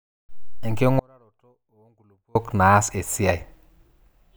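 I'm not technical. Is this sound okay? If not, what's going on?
No. From 0.99 to 2.35 seconds, about 1.4 seconds, there is an audio dropout to a faint residue: the speech cuts out abruptly, leaving only a very faint trace. This is likely a brief signal loss while the recording path stayed switched on.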